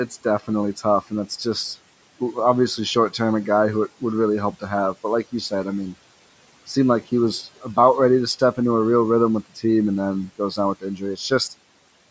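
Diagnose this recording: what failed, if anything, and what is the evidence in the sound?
Call processing: speech cut by the noise suppressor at 0.1–0.46, 7.43–7.77 and 10.81–11.31 s. The suppressor mistook quiet speech for noise and attenuated it by about 8–14 dB.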